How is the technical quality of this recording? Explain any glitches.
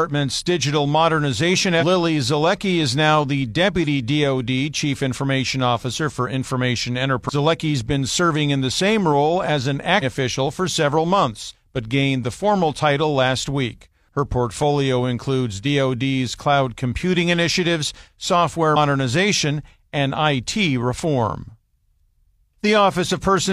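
The recording has four brief glitches, all caused by damaged data in a compressed stream. At 1.77 to 1.83 s, 7.25 to 7.30 s, 9.99 to 10.04 s and 18.72 to 18.77 s, a stretch of the encoded speech arrives corrupted. The decoder cannot read those frames correctly, loses its place and must hunt for the next valid frame header before it can continue. Each time, the speech is broken by a short chirp or blip about 50 to 65 ms long.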